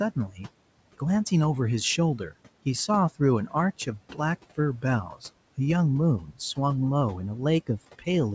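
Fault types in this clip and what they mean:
Speech cut by the noise suppressor: the suppressor mistook a brief stretch of speech for background and turned it down with the room noise, so from 0.3 to 0.4 s the sound drops by about 9 dB for roughly a tenth of a second and comes across faint and swallowed.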